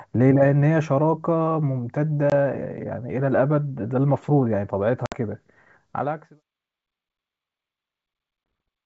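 Hard-edged silent gaps cut into the speech at 2.30 to 2.33 s, 5.06 to 5.15 s and 8.44 to 8.46 s, each followed by slightly distorted speech before it settles. This is packet loss on an ADPCM call. About 20 ms, 60 ms and 20 ms of audio go missing, roughly one, three and one packets. The receiving decoder's predictor and step size lose track of the sender's and need tens of milliseconds to realign.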